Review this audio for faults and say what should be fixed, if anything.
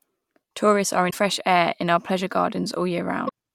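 Two short bursts of damaged data in the compressed stream break up the speech, at 1.07 to 1.16 s and 3.25 to 3.30 s. Corrupted frames there make the decoder misread them and lose sync until it finds the next valid header. Checksumming files and fixing transfer errors at the source would prevent this.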